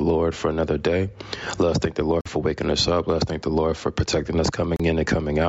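From the start there's gain pumping, swinging maybe 15 dB, likely a limiter fighting gain set far too high. Then at 2.21 s the sound drops out for 46 ms, and again at 4.76 s for 34 ms, before picking back up, which sounds like a Bluetooth stall, likely from interference draining the headphone buffer.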